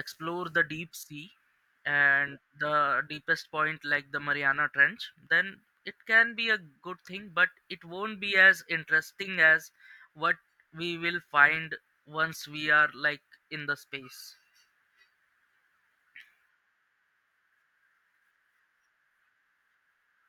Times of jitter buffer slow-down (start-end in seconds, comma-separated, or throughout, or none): none